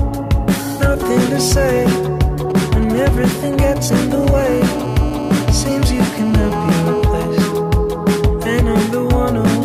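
A 2G mobile phone close to the recording chain first goes through its signalling phase, sending short groups of radio bursts that the audio circuitry rectifies into the signal. From 2.50 to 4.40 s this is heard as GSM signalling bursts: a galloping dit-dit-dit run of brief buzzes at the 217 Hz burst rate, sitting roughly 15 dB below the wanted sound and bearing no relation to it. At 4.40 s the phone settles into a call and transmits continuously at 217 bursts per second. Rectified the same way, this becomes GSM phone buzz: a hard, raspy 217 Hz tone rich in harmonics that holds steady until 7.02 s, about 16 dB below the signal.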